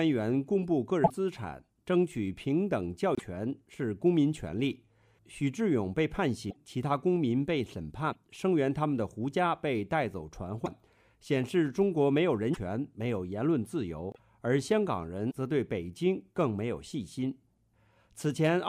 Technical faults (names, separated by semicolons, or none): broken MP3 bit reservoir